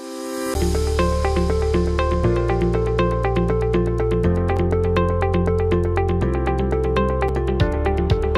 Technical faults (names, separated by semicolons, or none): CD skip